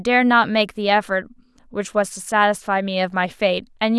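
No technical fault can be heard anywhere in the speech recording.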